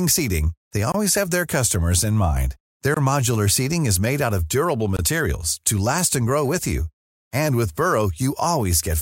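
The speech in this clip was delivered in chunks two seconds long, and silence was inserted at each join, giving a gap between chunks. None of the speech is lost, but it breaks off abruptly three times, from 0.92 to 0.94 s, from 2.94 to 2.97 s, and from 4.97 to 4.99 s. Each gap lasts about 23 ms and has hard edges, so the holes recur at a steady two-second rhythm.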